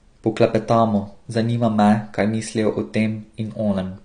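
Speech that sounds dull and smeared throughout, with fizzy, warbling sibilants and nothing above 9.7 kHz, likely from AAC compression at a low bitrate, around 32 kbps.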